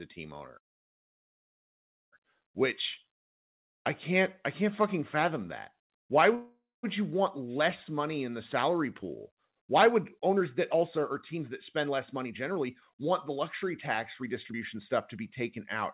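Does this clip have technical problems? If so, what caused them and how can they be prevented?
Yes. Just after "team owner", from 0.58 to 2.14 s, the speech stops and 1.5 s of near-silence is inserted, then resumes where it left off; a shorter gap at 6.35 to 6.85 s starts with a brief fading buzz before going quiet. This is a call audio freeze, likely caused by delayed packets emptying the jitter buffer. Steadier network paths with less congestion and a somewhat deeper jitter buffer prevent it.

From 8.63 to 15.61 s, after "less money in the", the speech runs about 12% fast at unchanged pitch and sounds hurried. This is a jitter buffer speed-up: the receiver trims pitch-period slices, around a second in total, to shed excess delay. A smoother network reduces the packet bursts that cause it.

The narrow bandwidth, with nothing above 4 kHz, fits the G.711 mu-law call path.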